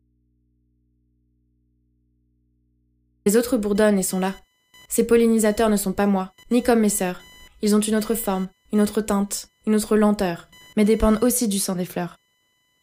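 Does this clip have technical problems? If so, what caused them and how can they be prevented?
Yes. The speech opens already inside an audio dropout to a faint residue. Until 3.26 s the signal is missing, and only a mains hum about 45 dB below normal level remains, which is typical of a live but disconnected input. Speech returns abruptly at "autres bourdonnent et sont". Unlike a pause or fade, the level jumps straight from hum to full speech, so a loose connector or momentary signal-path break is the likely cause. Securing cables and monitoring the input before recording prevents this.

Computer activity noise, a buzzing chirp pulsing at roughly 1 kHz and sitting about 35 dB below the speech, runs through the whole clip. Unlike steady mains hum, it rises and falls with the computer's processing load rather than with the speech, because those load changes disturb the ground shared with the audio circuit. 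Using an external, USB-isolated or balanced audio interface, or a ground-loop isolator, prevents it.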